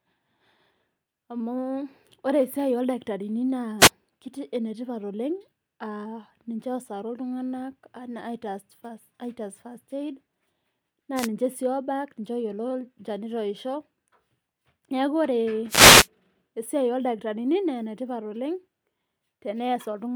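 The FM radio link of a wireless microphone fades as reflections cancel, letting receiver noise surge. These wireless microphone noise hits sound as brief swishes of static over the speech: at 3.79 to 3.90 s just before "ketii enetipat oleng", at 11.15 to 11.28 s before "ninche sii", and at 15.68 to 16.08 s before "esiai oldakitarini naa enetipat".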